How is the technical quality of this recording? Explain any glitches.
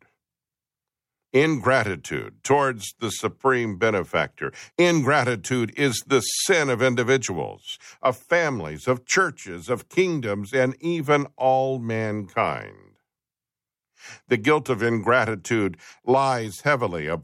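No technical faults are audible in this recording.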